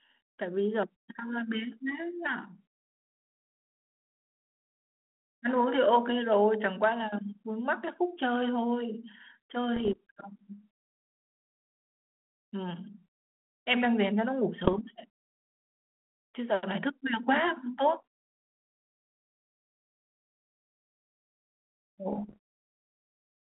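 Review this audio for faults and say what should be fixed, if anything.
Bit errors on an ADPCM link at 9.76 to 9.96 s, 14.61 to 14.78 s and 22.12 to 22.37 s, heard as pops and rough, gritty bursts with brief jumps in level, each about 0.2 to 0.25 s long. A few bits in every thousand were corrupted, and because an ADPCM decoder adapts its step size and prediction from each received code, every wrong bit throws both off until they settle, so the damage rings on instead of clicking once. The narrowband telephone coding itself, which fits 32 kbit/s G.726, carries only light, steady coloration. Prevent it with a cleaner radio or line path, or error detection with concealment ahead of the decoder.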